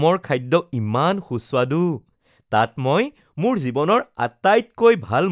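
No technical fault can be heard anywhere in the recording, and the signal holds steady throughout.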